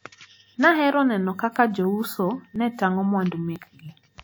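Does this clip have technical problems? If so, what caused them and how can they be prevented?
Yes. Periodic USB or driver dropouts occur from 0.57 s to 3.56 s, about four events spaced 1.00 s apart. Each time, a background process stalls the USB bus or audio driver and a couple of milliseconds of the speech are skipped outright rather than replaced with silence, so the waveform jumps and produces a tick. The strict one-second regularity points to a timed system task, not to anything in the recording itself. To prevent this, update the interface driver, raise the buffer size, and disable power-saving or polling tasks that wake the USB bus on a schedule.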